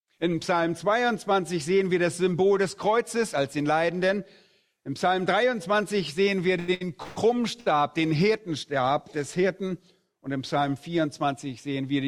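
Between 6.6 and 7.7 s the audio is repeatedly pulled out of its natural timing by network delivery problems. Three short stalls from a late packet occur at 6.59 to 6.70 s, 6.74 to 6.83 s and 7.60 to 7.68 s. In each, the sound at that moment is held on too long for 87, 66 and 59 ms respectively before playback resumes exactly where it left off. Nothing is lost, but each hold pushes everything after it later by the same amount, which is what happens when the jitter buffer drains and the receiver sustains the last sound until the overdue packet turns up. At 7.03 to 7.18 s there is a longer call audio freeze. For 136 ms the last sound continues and fades but never drops to true silence, and then the audio picks up again with no content missing, adding another 136 ms of delay. The likely cause is a burst of packets held up in transit, long enough to empty the buffer before they arrived.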